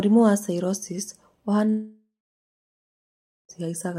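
From 1.69 s the speech trails into a fading buzz, then 1.4 s silence until 3.52 s, likely a long network dropout losing 1.8 s.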